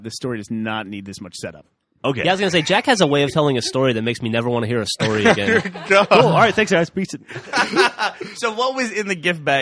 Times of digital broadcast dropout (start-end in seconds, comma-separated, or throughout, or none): none